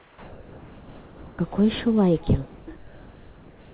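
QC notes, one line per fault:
0.00–1.39 s, 2.49–2.68 s, 2.76–3.72 s: comfort noise in place of the background. Pauses become steady, featureless hiss at nearly unchanged level, likely discontinuous transmission; spectrograms show smooth, textureless noise, waveforms an even flat floor.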